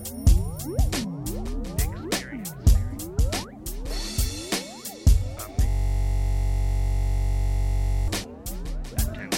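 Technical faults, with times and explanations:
0.34 to 9.19 s, word clock ticks: an unlocked digital link slips one sample roughly every 0.3 s, about 30 sharp clicks, seen as thin vertical spectrogram lines.
5.69 to 8.08 s, system hang loop: a frozen system replays one 21.33 ms block 112 times, buzzing at 46.9 Hz, which fits a 1024-sample buffer; the waveform repeats identically.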